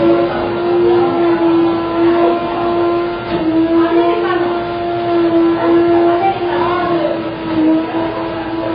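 Heavy AAC compression, likely AAC-LC squeezed to a very low bitrate (the damage fits roughly 16 kbps), runs throughout. The encoder cuts everything above 5 kHz and starves the remaining bands, so the sound is dull and smeared, with a warbling, fizzy texture on sustained parts.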